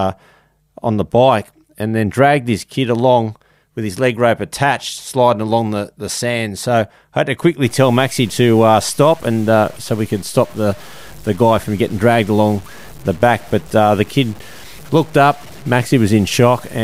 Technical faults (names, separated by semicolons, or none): low bit depth without dither